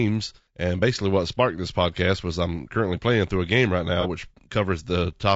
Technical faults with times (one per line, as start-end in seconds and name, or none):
0.00-5.36 low-delay AAC compression
4.00-4.06 AAC frame loss with concealment